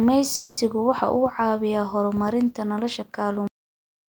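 At 0.35 s the speech stalls for about 220 ms, until 0.59 s: a call audio freeze. Incoming packets were likely held up and the jitter buffer emptied, so the receiver stretched the last sound into a fading buzz rather than silence. Nothing is lost; the speech resumes where it stopped, now 220 ms late. A spectrogram shows smeared horizontal bands where the harmonic detail should change, and the waveform shows a decaying, repetitive stretch with no true gap.

At 3.48 s a cut-off end stops the speech mid-sound. The final buffers were never written or played, so the audio drops straight to digital silence with no natural decay. On the waveform, the signal meets a flat line with no taper. On a spectrogram, energy across all frequencies ends at one vertical edge.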